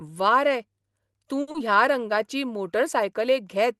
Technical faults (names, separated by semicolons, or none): short stall from a late packet; short concealed packet loss